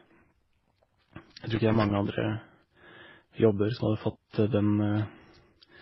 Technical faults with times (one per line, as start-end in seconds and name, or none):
0.00-5.81 transcoding between lossy codecs
1.55-2.07 loose connector crackle